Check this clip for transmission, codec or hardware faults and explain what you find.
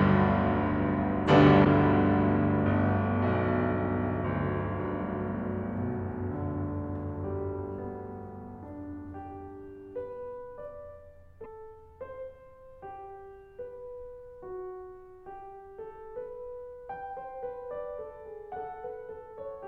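There are two short glitches in the music, both from damaged data in a compressed stream. At 1.61 to 1.66 s and again at 11.40 to 11.46 s, corrupted bytes throw the decoder out of sync until it finds the next frame header, producing a brief glitch each time.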